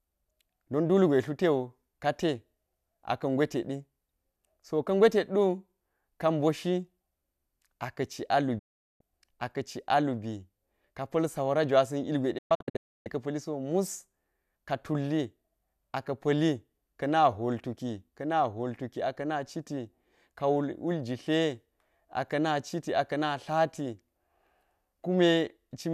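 A digital broadcast dropout twice interrupts this speech: the receiver lost valid frames and muted until clean ones returned. At 8.59 s the sound fades out within 8 ms and is gone until 9.01 s. From 12.38 to 13.07 s it breaks into several short holes, the longest 0.29 s, and that material is lost.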